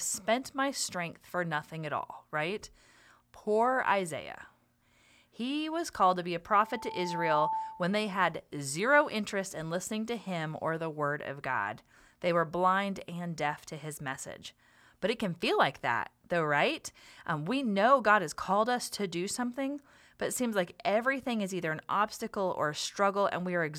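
From 6.53 to 8.01 s, after "called to be a", the microphone picks up its own loudspeaker and the loop gain passes one at 883 Hz, causing loudspeaker feedback squeal. A pure tone swells in under a second to about 5 dB above the speech, ending before "had zero interest in".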